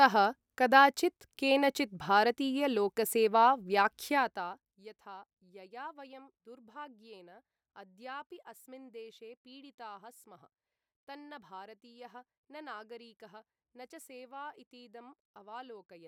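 From 4.04 to 4.81 s a fast ticking rides on the speech as it drops about 20 dB before "यथा यया वयं दुर्भाग्येन": zipper noise, the fade applied in roughly 50 unsmoothed steps per second.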